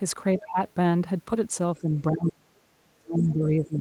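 Speech suppressed in double talk appears at 0.4 to 0.58 s, where the speech dips by roughly 15 dB, and again from 1.74 s to the end, where it drops far deeper. This is likely an echo canceller mistaking the talker for loudspeaker echo during overlap and attenuating both.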